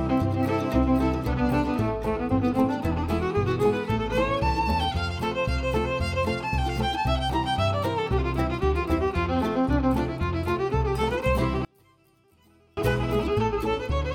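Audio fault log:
11.65–12.77 s: one channel inverted, likely. The level drops by about 35 dB for just over a second, as if one stereo channel flipped polarity, so the material shared by both channels cancels in the mono sum, leaving only a faint residue of their differences.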